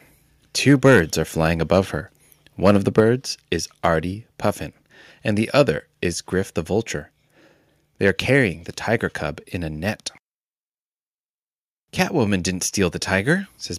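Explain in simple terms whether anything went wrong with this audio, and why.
The microphone's input level was likely set too high, causing microphone overload: the loudest moments exceeded what the recorder could capture, so their tops were cut off. This adds a harsh crackle at 0.84–0.99 s, just before "are flying above her", at 2.66–3.00 s, right after it, at 5.60–5.62 s, and at 8.07–8.09 s, just before "are carrying the tiger".

Right after that distorted stretch, the call software likely noticed the overload and turned the microphone down in one step, a microphone volume stepped down event. At 3.0 s, the voice and background suddenly get a little quieter.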